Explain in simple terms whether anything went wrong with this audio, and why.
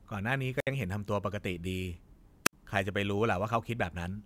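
Wireless microphone squelch dropouts happen at 0.57 s and again at 2.45 s. Each time, the microphone's radio signal weakens, a short burst of hiss rises, then the receiver mutes the speech for roughly 60 to 70 milliseconds before it returns.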